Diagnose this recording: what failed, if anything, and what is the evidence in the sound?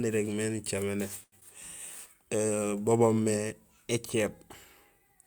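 At 1.23 to 1.35 s the speech hangs on one sound for about 88 ms. This is a short stall from a late packet, a failure at the network stage that showed up in the jitter buffer. A packet arrived late, the buffer ran dry, and the receiver held the last sound until the packet came, then resumed at exactly the point it had reached. Nothing is lost. The playout delay simply grew by 88 ms, which separates this from a drop.

At 1.40 to 1.44 s there is a brief smear where about 40 ms of speech never arrived in time. This is a short concealed packet loss, also at the network stage. Unlike the stall, the content is actually gone. The receiver covered only about 11 ms by extending the preceding sound, then blended back into the real audio further along. The timeline jumps ahead, shrinking the delay by roughly 30 ms, so a short sound may be clipped rather than merely held.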